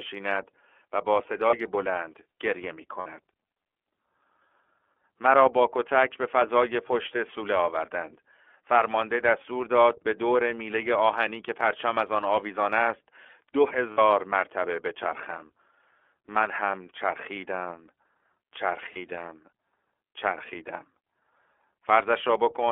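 iLBC codec, throughout: the speech has been squeezed into a narrowband line of 300 Hz to 3.4 kHz and coded in standalone 30 ms frames at a rate that fits 13.33 kbps, so the voice sounds plainly rough and slightly synthetic, with nothing above 3.4 kHz.

Lost iLBC frames at 1.50 s, 2.99 s, 13.91 s and 18.93 s: packets went missing, and the decoder filled each gap by repeating the last pitch cycle with added noise. The gaps are about 30 ms at 1.50 s and 18.93 s and about 60 ms at 2.99 s and 13.91 s. Each sounds like a briefly held, buzzy vowel, and the voice comes back cleanly right after.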